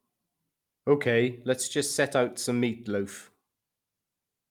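Speech recording, no audible technical faults.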